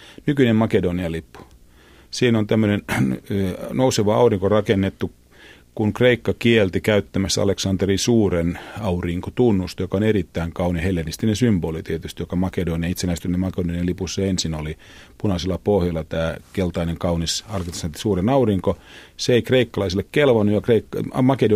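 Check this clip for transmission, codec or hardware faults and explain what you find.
One hardware fault runs through the whole speech clip. Video or display buzz, throughout: a screen or video cable is coupling interference into the audio path, producing a 60 Hz buzz at the picture's field rate with hash above it, sitting roughly 35 dB below the speech.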